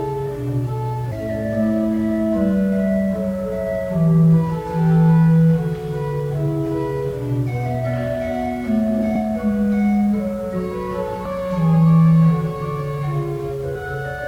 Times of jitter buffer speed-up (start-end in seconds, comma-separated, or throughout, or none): none